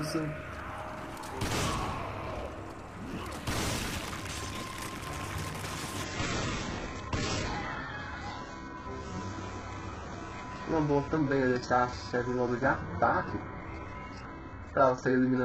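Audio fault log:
6.04–15.45 s, adaptive stream at a lower bitrate: the player switched abruptly to a far lower-rate version, as a very low-bitrate HE-AAC stream would sound; nothing remains above 8 kHz, codec artefacts rise, and there is no gap.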